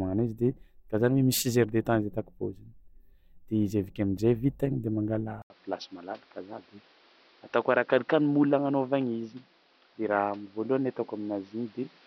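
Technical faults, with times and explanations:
5.42–12.06 s, input switched to a poorer device: right after "vita igny de" the sound drops out for 80 ms, then returns duller and boxier, with nothing above 5.9 kHz, a level around 5 dB lower and a new background noise floor roughly 30 dB below the speech. Bandwidth, tone, level and noise all change at one instant, which likely means the recording moved to a narrower-band microphone or a headset call profile.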